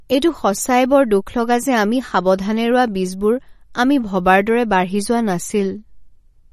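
From start to finish, the speech carries plainly audible coding damage, likely from MP3 compression. Nothing is present above 13.1 kHz, so the top of the spectrum is sliced off at a fixed point. That cut and the strength of the damage point to a low bitrate, around 40 kbps. Short of bits, the encoder drops weak frequency components. These flicker in and out from frame to frame. The result is a watery, swirling quality, with metallic chirps on the s sounds.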